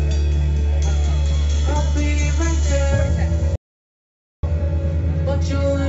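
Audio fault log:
3.56 to 4.43 s, audio dropout to silence: the sound cuts off abruptly and returns about 0.87 s later, with the gap going silent, not even room tone. That points to the input likely dropping out while the recorder kept writing silence, so whatever happened there is lost.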